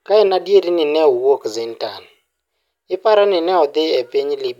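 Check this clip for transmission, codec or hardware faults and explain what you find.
Nothing here needs flagging: the speech comes through with no faults to report.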